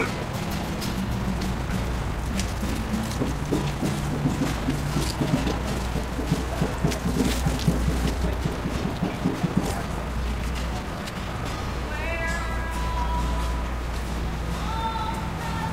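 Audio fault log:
0.00–11.58 s, time-stretched section: sound runs 1.42 times faster at unchanged pitch, rushed, likely software dropping short pieces to shorten it.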